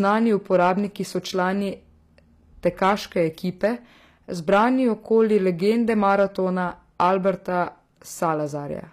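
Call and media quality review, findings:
Hard clipping on loud bits at 0.04–0.17, 0.54–0.70, 2.66–2.92, 3.64–3.67, 4.52–4.67, 5.18–6.24 and 7.00–7.30 s. Some stage overloaded by about 2 to 5 dB, flattening peaks and adding upper harmonics.

Plainly audible gritty, metallic treble, nothing above 14.9 kHz. Likely HE-AAC compression, fits roughly 24 kbps. Treble is rebuilt from copied lower bands, not the original.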